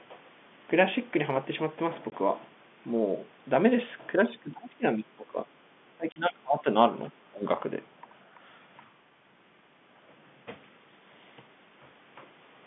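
A speech recording with two problems. At 2.1 s and again at 6.12 to 6.16 s there's packet loss filled with silence: hard-edged gaps of 20 ms and 40 ms, which fits one and then two lost 20 ms packets. Between 4.31 and 5.39 s, 5.95 and 6.66 s, and 7.1 and 7.45 s, the talker dips by up to about 20 dB in chunks, most likely speech suppressed in double talk as the echo canceller clamps down.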